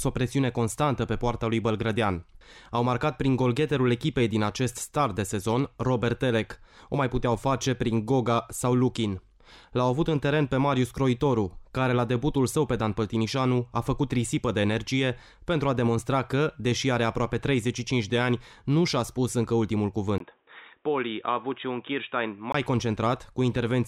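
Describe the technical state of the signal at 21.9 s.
At 21.9 s the sound is dull and boxy, with nothing above 3.8 kHz, a few decibels quieter, and a faint new noise floor. This follows a 20 ms gap at 20.18 s and lasts until 22.54 s. The likely cause is an input switched to a poorer device, whose narrower band and own noise replace the original input's.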